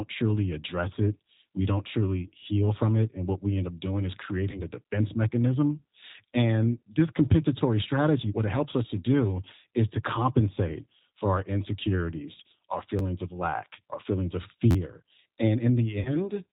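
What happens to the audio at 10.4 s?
G.729 codec coding runs through 10.4 s, as it does for the whole clip. The speech there is rebuilt rather than passed through: each 10 ms frame is resynthesised from a vocal tract filter, a pitch predictor and a handful of pulses, and nothing above 4 kHz survives. The result is plainly audible: speech stays intelligible but sounds muffled, slightly rough and synthetic, which fits a low-rate codec of about 8 kbit/s.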